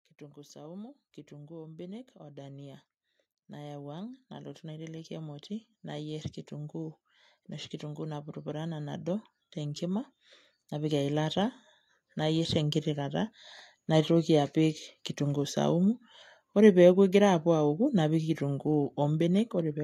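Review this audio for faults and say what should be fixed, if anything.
Automatic gain rising appears twice in this speech. From 0.18 to 7.08 s the level climbs by about 13 dB, and from 7.8 to 13.32 s it climbs again by about 9 dB. In each case the gain control judged the input too quiet and raised its gain slowly over several seconds, so the speech and the background noise swell up together rather than the speech alone getting louder. To prevent it, set a fixed input gain with adequate level and disable automatic gain control during recording.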